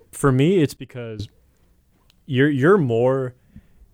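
Speech recording with a sudden gain jump. At 0.77 s the level drops by about 16 dB from one sample to the next. The speech and the background noise fall together. At 1.2 s the level snaps back up just as abruptly. Neither edge has a fade. The likely cause is a digital gain setting or bit shift applied instantly, without a ramp, and then removed the same way.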